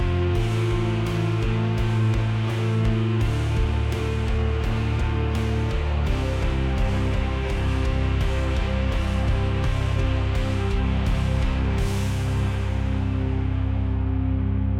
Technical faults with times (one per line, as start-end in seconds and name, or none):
none